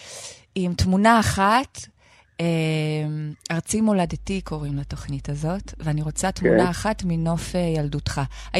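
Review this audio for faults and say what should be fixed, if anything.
A steady low 50 Hz drone with some low harmonics enters at 4.06 s and continues to the end at 8.60 s, sitting only about 15 dB below the speech. This mains hum comes from the power line coupling into the signal path, typically through a ground loop or a nearby transformer. To prevent it, keep all equipment on a single grounded outlet, use balanced cables or a ground-lift isolator, and route audio lines away from power supplies.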